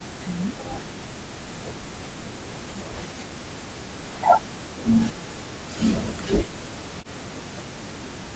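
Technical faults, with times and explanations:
0.0–6.08 s, 6.42–7.02 s and 7.69–8.23 s, speech suppressed in double talk: the speech repeatedly dips by around 40 dB or breaks into fragments, likely because an echo canceller mistook overlapping far-end talk for echo. The waveform shows collapsed envelope stretches, and the spectrogram shows harmonics thinning to gaps.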